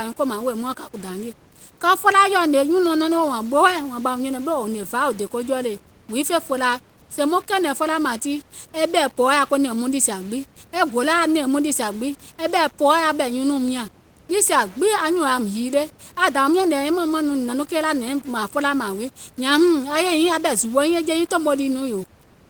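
From start to finish the speech carries a grainy, rasping distortion that rises and falls with the voice, typical of low bit depth without dither. The signal has likely been rounded to very few levels, which fits roughly 7 bits, leaving error only about 25 dB below the speech. Unlike steady hiss or dithered noise, this grit follows the speech itself, coarsening quiet syllables and decays and collapsing toward silence in pauses, where the faint room noise would otherwise sit.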